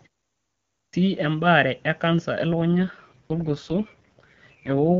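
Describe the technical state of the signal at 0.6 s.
At 0.6 s the signal sits inside a clipped start after a pause, running from 0.32 to 0.93 s. After 0.32 s of silence the output device has gone to sleep and is still waking, so about 0.61 s of the opening speech is swallowed and "ebaare e kansa" bursts in abruptly, missing its first sounds. That lost onset separates it from muted pauses, where only background drops out and no speech goes missing.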